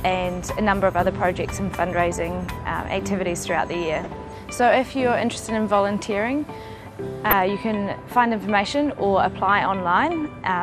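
Throughout, the sound is dull and carries a gurgling, granular grain, likely MP2 compression. The missing top end fits a rate around 80 kbps, and the damage is steady, unlike a sudden error. DAB burbling hits briefly at 4.00 to 4.08 s and again at 7.26 to 7.33 s. These are short blips of noise in individual sub-bands, pointing to several corrupted frames from a small trickle of bit errors. Unlike the constant dullness, they come and go in isolated bursts.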